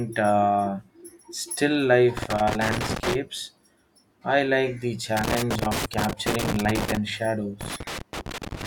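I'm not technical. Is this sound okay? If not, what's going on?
No. Loose connector crackle breaks up the speech from 2.17 to 3.15 s, 5.17 to 6.97 s, and 7.61 to 8.66 s. A worn or dirty plug keeps cutting the signal in and out, causing scratchy bursts.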